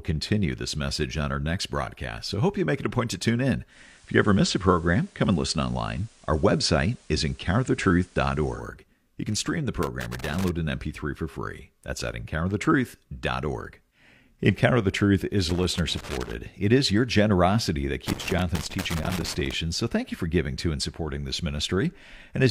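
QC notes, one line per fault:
3.68–8.65 s: digital radio blending to analogue. Reception drops to FM over a 121 ms cross-fade, adding hiss roughly 35 dB down and about 2 dB level change.
9.83–10.49 s, 15.50–16.33 s, 18.07–19.54 s: loose connector crackle. A worn contact makes and breaks as it shifts, chopping the signal into irregular bursts of scratchy crackle.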